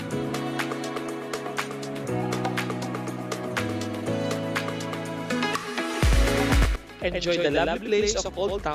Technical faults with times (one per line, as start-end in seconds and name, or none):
5.63 compressed frames skipped
5.94-8.75 doubled audio track
8.25 compressed frames skipped